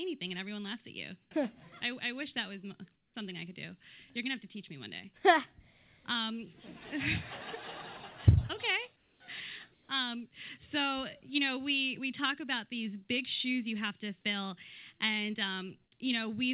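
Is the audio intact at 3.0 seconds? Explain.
No. From 2.96 to 3.14 s, comfort noise replaces the background, likely because the sender paused transmission. The result is a featureless hiss about 6 dB quieter, smooth and textureless on a spectrogram.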